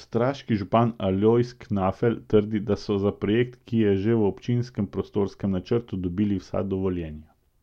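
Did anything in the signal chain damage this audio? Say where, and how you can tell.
No, nothing along the way seems to have harmed this speech recording, so there's no problem to track down.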